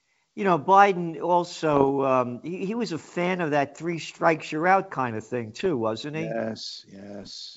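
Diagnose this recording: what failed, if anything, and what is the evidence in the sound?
Bit errors on an ADPCM link at 1.72–1.90, 5.56–5.67 and 7.21–7.37 s throw off the decoder's step size, causing pops and rough bursts that show as broadband spectrogram streaks and jagged waveform jumps.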